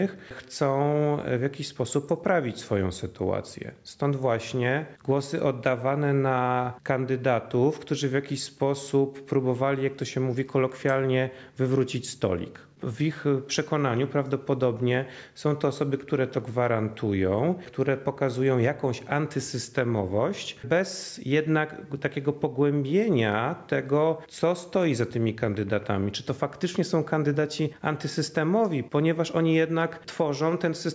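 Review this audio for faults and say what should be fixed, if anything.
No faults are audible, so nothing needs fixing.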